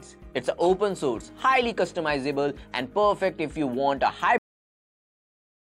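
At 4.38 s the sound has a cut-off end: the final buffers never played, so it stops mid-sound into digital silence, a flat waveform and blank spectrogram without any decay tail.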